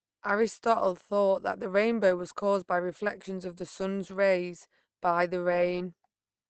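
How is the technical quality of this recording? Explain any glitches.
The recording is audibly degraded from start to finish. The cause is likely Opus compression. The speech sounds muffled and hoarse, with nothing above about 8.6 kHz. That points to Opus's narrowed speech mode at a low rate, around 16 kbps.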